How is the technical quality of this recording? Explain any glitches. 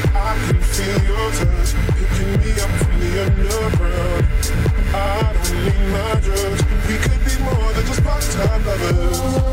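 One glitch stands out: a brief stutter at 5.04 s, where about 93 ms of sound plays twice. This is repeated frames: a short run of compressed data, which fits two frames, was delivered twice, so the decoder replayed that slice and the recording grew by 92.9 ms.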